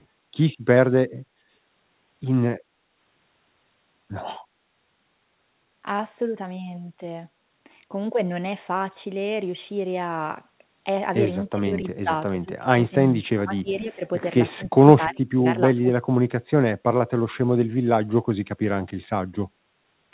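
Speech carried over a call whose G.711 mu-law coding leaves nothing above 4 kHz shows an echo leak from 0.00 to 0.05 s: a very faint copy of the sound, around 40 dB down, trails it by 293 ms, most likely because the far end's echo canceller let some loudspeaker pickup through. On a spectrogram it appears as a pale, shifted duplicate of the opening energy. From 2.66 to 2.91 s the background is gated by the echo canceller, which pulled the microphone down by about 8 dB for roughly 150 ms while its loudspeaker played. The waveform's noise floor visibly notches, then recovers. Speech is suppressed in double talk from 11.48 to 14.02 s, dipping by around 25 dB over about 1.5 s, and again from 14.56 to 16.2 s, dropping by around 35 dB over about a second. These look like pinched stretches in the waveform, likely because the canceller struggled to separate this talker from the other side.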